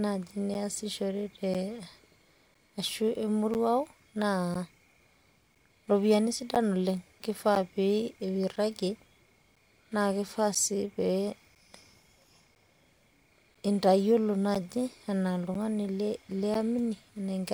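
From 0.54 s to 16.55 s, periodic USB or driver dropouts recur once per second. Each blanks about ten milliseconds, heard as regular ticks.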